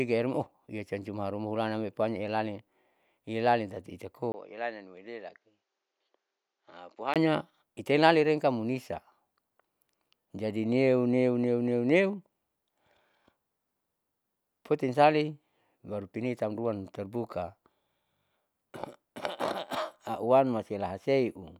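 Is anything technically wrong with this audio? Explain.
Yes. From 4.32 to 7.16 s the speech turns dull and about 10 dB quieter, with nothing above 7.6 kHz, a 20 ms gap at the switch and a faint new noise floor, likely an input switched to a poorer, narrower-band device mid-recording.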